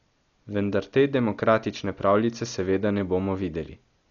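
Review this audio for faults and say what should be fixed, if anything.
The whole clip is dull and band-limited, with nothing above about 7 kHz, and there's a rough, fluttery noise clinging to the voiced parts of the speech. That's heavy codec damage, likely from Dolby Digital compression at a starved bitrate, which fits something around 40 kbps. At that rate the encoder narrows the band and leaves many frequency lines with no real detail, so the decoder fills them with dither noise, and that's the grit you hear around tones. To avoid it, encode from the original source at a much higher AC-3 or E-AC-3 bitrate.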